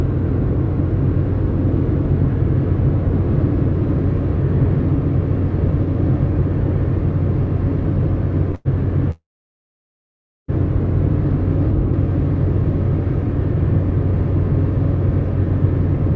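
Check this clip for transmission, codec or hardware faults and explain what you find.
There are two stalls, both call audio freezes. At 8.55 s the sound briefly turns into a fading buzz for about 0.1 s. At 9.11 s it hangs again, fades, and goes almost completely silent for about 1.3 s before resuming at 10.50 s with nothing lost. The likely cause is packets held up in transit: the jitter buffer ran dry, the receiver stretched the last sound and then fell quiet, and playback picked up exactly where it stopped. Throughout the clip, the G.722 call codec leaves no content above 8 kHz.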